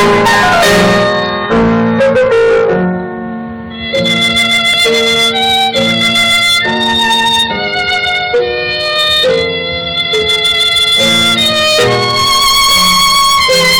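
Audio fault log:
throughout hard clipping: driven about 19 dB past full scale, roughly a fifth of samples sit flat-topped on the waveform, smearing harmonics upward as harsh fuzz on every loud passage.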